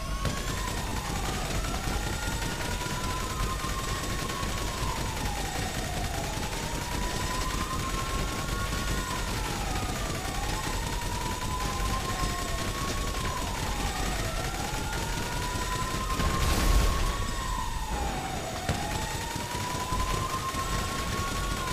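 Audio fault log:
0.89–0.91 s and 3.23 s, repeated buffer: two brief buzzy clicks, the first longer, as a tiny slice of sound plays three times, then twice, with hard joins. New audio arrived late, so the last block (fits a 10 ms buffer) replayed, dropping about 20 ms, then 10 ms.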